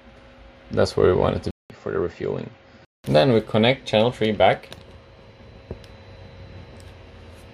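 From 1.51 s to 3.04 s the input likely switched to a poorer device, swapping to a second capture path with a narrower band and its own character. The sound drops out for about 0.19 s at the switch, then returns duller and boxier, with nothing above 7.6 kHz, roughly 5 dB quieter, and sitting on a faint new noise floor far below the signal. At 3.04 s the fuller, brighter sound comes back.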